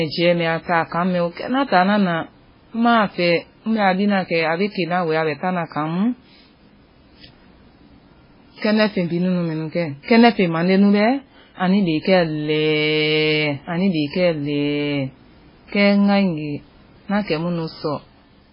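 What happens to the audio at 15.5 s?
At 15.5 s the speech sounds watery and swirly, with smeared attacks. Nothing is heard above about 5.3 kHz. This runs through the whole clip. The likely cause is heavy MP3 compression, fitting roughly 16 kbps, where starved weak frequency lines flicker on and off.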